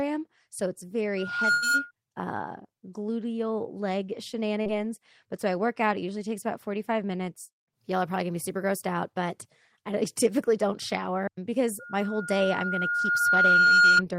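The clip is speech with two loudspeaker feedback squeals and two packet-loss dropouts. The first squeal runs from 1.17 to 1.91 s. It is a steady 1.4 kHz tone. It swells over roughly 0.4 seconds and peaks about 5 dB above the speech. A microphone is hearing the loudspeaker it feeds. At 1.4 kHz the loop gain tops one, so that tone keeps growing. The second squeal begins at 11.79 s, right after "typically don't shower because", and lasts to 14.02 s. It is the same 1.4 kHz tone. This time it builds slowly, over about two seconds, and ends near 10 dB above the speech. A burst of packet loss sits inside the first squeal, from 1.51 to 1.64 s, just before "uh gluteal leg". About 100 ms of audio is gone. The receiver stretched the last sound across the hole and faded it down. It comes out as a held, dimming smear. The speech then jumps ahead, with that stretch missing. A short concealed packet loss follows at 4.62 to 4.67 s, just after "uh gluteal leg". 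Here about 40 ms never arrived in time. The decoder filled the gap by extending the previous sound, then blended back in. It is heard as a brief wobble in the speech.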